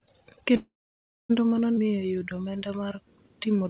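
A call audio freeze runs from 0.56 to 1.31 s. The packets carrying this speech were most likely held up in transit, leaving the jitter buffer with nothing to play. The receiver stretched the last sound briefly and let it die away, and most of the gap, about 0.6 s, is plain silence. When the delayed audio arrived, playback picked up where it had stopped, so about 0.73 s was inserted and nothing is lost.

A skip ahead follows at 1.75 to 1.79 s. Around a third of a second of audio never gets played, either dropped in transit or discarded by an overfull jitter buffer while newer packets were already queued. Playback jumps straight to the later material, bridged by only a few milliseconds, so the sound on either side is joined almost directly and a chunk of the speech simply vanishes at that point.

A jitter buffer slow-down runs from 1.83 s to the end at 3.69 s. Low on reserve, probably after the previous disruptions, the buffer repeated single pitch periods and slivers of pauses over and over to rebuild its margin, adding about 0.2 s in total. 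The speech plays at about 90% speed with its pitch unchanged, so sounds are drawn out, with a slight warble at times. Through all of this the G.711 call path leaves nothing above 4 kHz.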